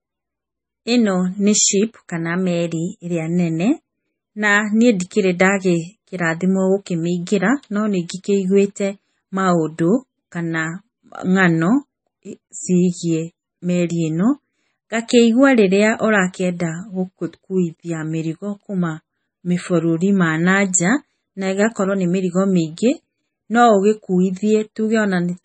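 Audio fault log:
Throughout: MP3 compression, likely from a very low bitrate near 24 kbps. Nothing sounds above about 9 kHz, and weak frequency lines flicker between frames, giving watery, swirling speech with chirpy s sounds. That flicker and the smeared onsets set it apart from a simple low-pass filter.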